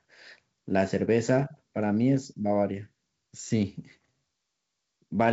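No technical faults can be heard in this speech, which passes through G.722 wideband telephone coding at 64 kbit/s with nothing above 7.7 kHz.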